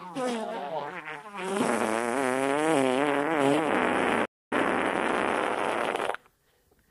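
At 4.25 s a playback stall cuts the sound dead for about 0.26 s, likely from the player starving for data, leaving a flat, empty gap in the waveform and spectrogram.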